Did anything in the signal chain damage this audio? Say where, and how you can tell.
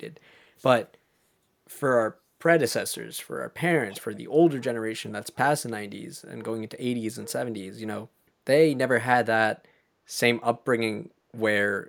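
Yes, in call processing. From 3.89 to 4.17 s, a faint echo leak repeats the speech 340 ms late, likely from an echo canceller missing loudspeaker pickup.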